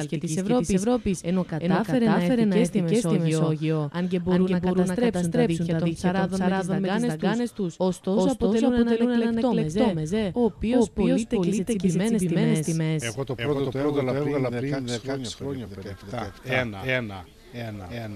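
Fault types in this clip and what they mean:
Doubled audio track, throughout: a second, equally loud copy of the sound runs around 400 ms behind the first, full-band and dry, with no decay or room colour. This likely comes from the signal being captured twice, once through a slower path.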